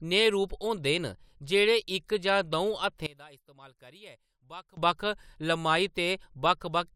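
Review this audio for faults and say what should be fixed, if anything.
From 3.06 s to 4.77 s the speech collapses, dropping by about 22 dB and leaving a faint residue before returning at full level. The likely cause is one channel inverted: with one side of the stereo pair flipped in polarity, the centred speech common to both channels cancels when they are summed to mono, and only the small difference between the channels remains audible. The fix is to restore the correct polarity on the affected channel for that section. To prevent it, check polarity with a phase-correlation meter and a mono fold-down before the audio leaves the mix or edit stage.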